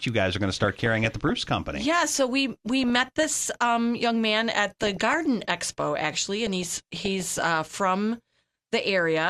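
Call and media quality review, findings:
DAB burbling on the speech at 0.63–1.36, 2.84–3.35, 4.69–5.14, 6.47–7.47 s: noise blips in single sub-bands as bit errors slip past error correction and corrupt MP2 sub-band samples. Weak reception likely.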